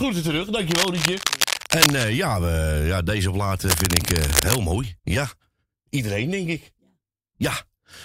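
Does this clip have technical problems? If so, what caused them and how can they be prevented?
Yes. Cable scratch noise appears twice, from 0.70 to 2.10 s and from 3.68 to 4.59 s: dense, irregular bursts of scratching and rustling roughly as loud as the speech itself. The likely cause is a worn cable, connector or control being moved, its contact resistance fluctuating rapidly and injecting noise into the signal path. Replacing or reseating worn cables and connectors, and securing them so they cannot shift during recording, prevents this.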